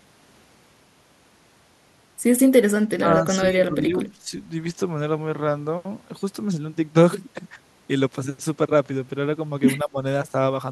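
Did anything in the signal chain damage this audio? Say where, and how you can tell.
Yes. In call processing, the speech level drops by about 15 dB in patches between 2.99 and 4.32 s, and by about 20 dB at 9.83 to 9.96 s. This is likely speech suppressed in double talk: the echo canceller attenuated the near talker along with the echo.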